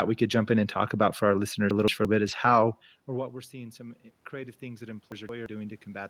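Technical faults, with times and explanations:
0.73–0.79 s and 2.23–2.37 s, lost packet rebuilt from error correction: right after "could jump in and", about 40 ms drops out, then about 80 ms more later on. There's no gap because the decoder played the low-bitrate copies carried in the following packets, so those bits just sound rougher and noisier. The lengths fit two and then four 20 ms packets.
1.71–2.05 s and 5.12–5.46 s, chunks out of order: just after "about for our listeners", and again later, one 0.17 s chunk plays a slot late, behind the chunk that should follow it. Nothing's missing, but the order is scrambled, so you get a jumbled moment with three hard joins.
3.06–5.91 s, automatic gain rising: the signal reaching the mic drops by about 21 dB, and you can hear the level fall, like someone leaning back, from around 2.5 s. The gain control then ramps up by about 8 dB over nearly three seconds, so voice and room noise swell together.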